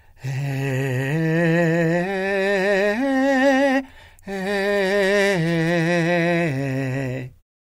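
No faults found in this music; the level eases down in a smooth, deliberate fade-out at the very end with no click or hard edge.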